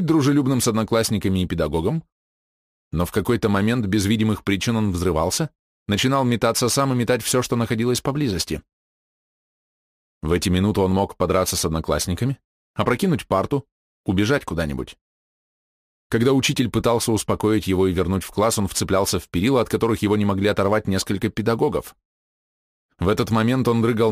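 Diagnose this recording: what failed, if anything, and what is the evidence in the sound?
A crude rate conversion failed at the sample-rate conversion stage. The resampler simply kept the nearest sample and dropped the rest, with no interpolation filter, which fits a 48 kHz to 44.1 kHz conversion. The dropped samples fall in a fixed repeating pattern, so the error is periodic and forms shifted, inharmonic copies of the audio. Throughout the clip, a gritty, inharmonic fizz sits roughly 25 dB below the signal and rises with louder, brighter passages.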